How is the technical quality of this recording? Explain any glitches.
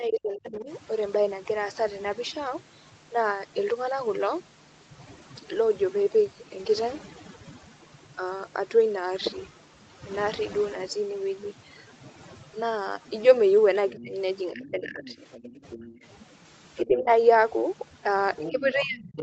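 The recording has three problems: heavy-handed noise reduction throughout, repeated dips in the talker's level, and bursts of a second voice bleeding in near the end. Everything is band-limited to 8 kHz, which is expected for an Opus call path and isn't a fault.

Overdone noise removal runs the whole length of the clip. The suppressor was set too aggressively, so it pulls individual frequency bands right down whenever they look like its noise estimate. That also catches the softer parts of the speech. You hear a background that's almost dead silent apart from little twinkling specks.

Speech suppressed in double talk shows up at 0.0–0.69 s, 13.9–15.23 s, 15.79–15.86 s, 16.85–17.1 s, and from 18.48 s to the end. The level sags, by roughly 30 dB at the worst points and around 15–20 dB elsewhere, and the voice goes dull or breaks into pieces. The likely cause is the echo canceller failing to separate the talker from the loudspeaker echo while both sides spoke, so it ducked everything.

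Other side's voice leaking through appears at 14.05–15.98 s, 16.77–17.04 s, and from 18.36 s to the end. A second voice sits under the talker, at about 20 dB down in the first stretch, about 15 dB in the second and only about 10 dB in the last. That's likely loudspeaker playback the echo canceller didn't fully remove from the mic. Note how it overlaps the level dips above.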